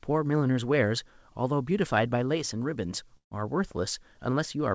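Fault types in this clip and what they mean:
Burst of packet loss: Around 3.17 to 3.34 s, a run of lost or late packets leaves a hole that the receiver fills by stretching the last sound and fading it, so roughly 150 ms of speech is gone and about 120 ms of that ends up silent. On a waveform the envelope decays to near zero before the speech resumes abruptly. A spectrogram shows smeared, repeated bands dissolving into a dark gap, all below the 8 kHz ceiling of the call codec.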